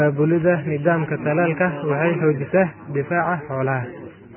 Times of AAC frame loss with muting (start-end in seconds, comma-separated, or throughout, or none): none